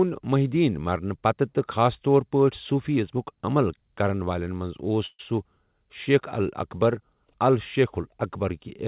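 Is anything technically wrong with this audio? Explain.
Yes. A call audio freeze occurs at 5.06 to 5.21 s, likely from delayed packets draining the jitter buffer: the last sound stretches into a fading buzz for about 128 ms, with roughly 20 ms of silence, then the speech resumes without loss but runs about 128 ms later.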